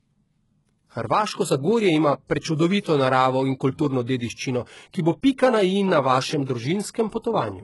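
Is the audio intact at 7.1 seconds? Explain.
No. Pre-echo occurs from 7.09 to 7.12 s, a smear of about 35 ms. The codec spreads its quantisation noise across an entire transform block, so when a sharp onset lands late in that block, noise scaled for the loud attack also fills the quiet stretch just before it. The result is a brief hiss ahead of the attack, which itself sounds softened and blurred rather than crisp.

HE-AAC compression also affects this moment, as it does the whole recording. The top of the spectrum stops dead near 11.5 kHz, and the treble below that sounds synthetic. This is likely the work of spectral band replication, which copies lower bands upward under a coarse envelope, so the harmonics fail to line up across the crossover. Sibilants turn gritty and metallic, and the heavy damage fits a very low bitrate, around 12 kbps.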